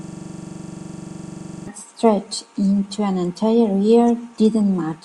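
A system hang loop is already under way at 0 s, lasting to 1.68 s. One 42.67 ms slice repeats at 23.4 Hz, a buzzing stutter.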